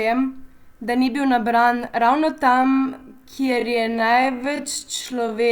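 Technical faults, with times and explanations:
2.52 to 5.52 s, time-stretched section: the pace abruptly drops to about 0.53 times normal while pitch holds, sounding dragging, likely from software lengthening the audio by repeating short pieces. On a spectrogram, harmonics stay at the same height while syllables stretch out; the waveform shows repeated, near-identical cycles.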